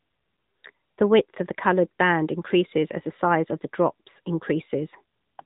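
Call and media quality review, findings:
AMR narrowband mobile codec, whole clip. Speech sounds boxed-in and buzzy, with nothing above about 3.8 kHz. Probable component: AMR-NB encode on the mobile leg. It samples at 8 kHz and rebuilds speech from a vocal-tract model excited by sparse pulses. The coding damage is plainly audible, which fits one of the mid-rate modes, around 10.2 kbps. Worth checking whether wideband was negotiated.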